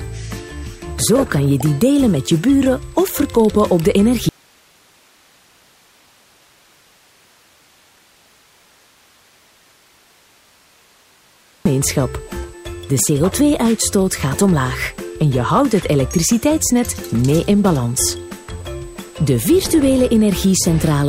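Right from the start and all the way through there's a USB whine, a thin, steady high tone pinned at 8 kHz, with its strongest component an octave up at 16 kHz. It sits roughly 30 dB under the sound. That's the bus's 125-microsecond microframe rhythm leaking into the analogue side through power or ground, and because it tracks the bus clock rather than the audio, the pitch never moves.

Then at 4.29 s the sound just drops out to a faint residue and doesn't come back until 11.66 s, so you lose about 7.37 s. Both edges are sudden, not a fade. What's left in the gap is plain hiss, something like 35 dB down. The wanted signal was likely lost somewhere upstream while everything after the break kept running, which is why you still get that noise floor instead of true silence.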